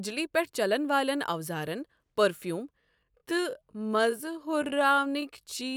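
Speech, with a time-stretched section running from 2.77 s to the end of the clip at about 5.77 s. At that point the pace drops abruptly to 0.64 times the original speed while the pitch stays where it was, so the remainder sounds drawn out and dragging. The likely cause is software lengthening that portion to fill a set duration, preserving pitch by repeating short slices of the waveform.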